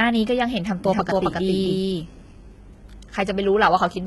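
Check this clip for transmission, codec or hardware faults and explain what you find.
Two faults are audible in this speech. HE-AAC compression runs throughout. A doubled audio track appears from 0.85 to 2.31 s.

HE-AAC compression lasts the whole clip. The treble is likely rebuilt from copied lower bands. Sibilants sound gritty and metallic, nothing sits above 11.8 kHz, and the heavy damage fits roughly 16 kbps.

The doubled audio track runs from 0.85 to 2.31 s. A second copy, likely from a slower capture path, trails roughly 0.3 s behind at about equal level. It starts and stops abruptly, with no decay.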